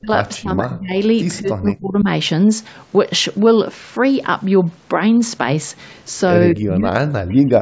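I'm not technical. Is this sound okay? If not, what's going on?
No. When both ends of the call likely talked at once, the echo canceller mistook this speech for echo and turned it down: speech suppressed in double talk. The voice dips or nearly vanishes at 0 to 0.09 s, 0.37 to 0.97 s, 1.4 to 2.06 s, and from 6.53 s to the end.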